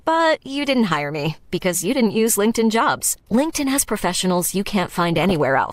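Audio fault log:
2.97 to 3.19 s and 5.13 to 5.33 s, DAB burbling: in two bursts of about 0.2 s each, the speech is hit by short blips of noise, which points to weak reception with a bit error rate of around 0.4 to 0.5 percent. Corrupted MP2 samples put blips of noise into single sub-bands, and wrong scale factors make a sub-band jump in level for up to a frame. On a spectrogram, isolated rectangular blocks flare and vanish at scattered frequencies, and the waveform shows abrupt, uneven envelope jumps.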